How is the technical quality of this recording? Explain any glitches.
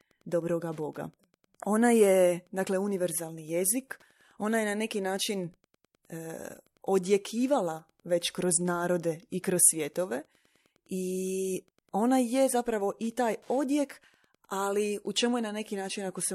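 A steady, faint ticking runs under the speech from start to finish, about ten clicks every second, sitting far below the level of the talking. This is Wi-Fi interference. A Wi-Fi radio close to the recording circuit transmits a beacon every 102.4 ms, and the audio electronics rectify each radio burst into a small click. The result is a regular tick pattern locked to that beacon rate.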